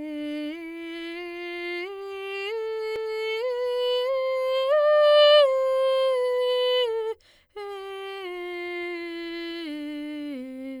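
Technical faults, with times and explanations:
2.96 s, CD skip: a brief tick and a silence of only a couple of milliseconds, after which the music carries on from a different point instead of where it left off. A knock or a disc flaw made the laser jump to another turn of the spiral track, so the player muted briefly and resumed elsewhere. Unlike a plain dropout or click, which leaves the musical timeline intact, the displacement in the music gives it away.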